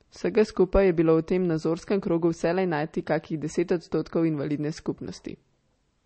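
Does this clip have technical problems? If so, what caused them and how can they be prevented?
Yes: throughout, the speech is cut off above 8.4 kHz and sounds watery and swirly, likely from MP3 compression at a bitrate that fits about 32 kbps. Unlike a plain low-pass filter, the weak frequency lines flicker on and off. Encoding at a higher bitrate prevents this.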